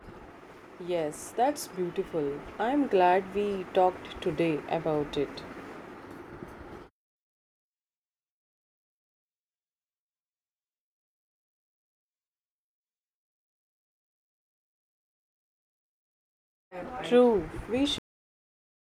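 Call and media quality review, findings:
Cut-off end: speech stops mid-sound at 17.98 s, flat digital silence to clip end, no decay tail. Probable component: capture/recording writer. Final buffers never flushed to file before stop, so audio truncates abruptly instead of finishing.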